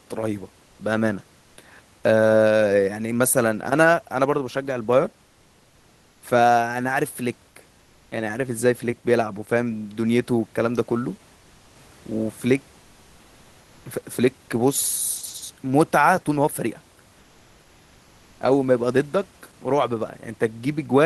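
The sender likely stopped transmitting during pauses under discontinuous transmission, as Opus DTX does, leaving the receiver to fill the gaps with comfort noise in place of the background. From 5.27 to 6.21 s, and again from 11.35 to 11.75 s, the room noise, otherwise about 35 dB under the speech, gives way to a smooth, featureless hiss, about 1 dB and then about 2 dB quieter, before the real background returns.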